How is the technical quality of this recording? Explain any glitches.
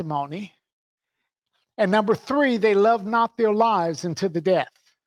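No glitches or dropouts are audible anywhere in the recording, and there is nothing to flag.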